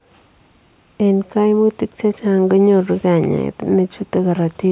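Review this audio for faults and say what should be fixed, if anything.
Nothing to fix in the speech here; no faults were found.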